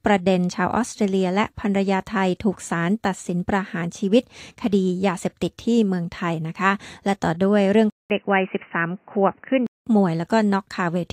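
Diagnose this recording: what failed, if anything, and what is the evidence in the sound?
The capture input likely switched to a poorer device at 7.9 s. A 200 ms silence marks the switch, then the sound turns dull, with nothing above 3 kHz and a new noise floor about 40 dB down at the same level, until 9.87 s.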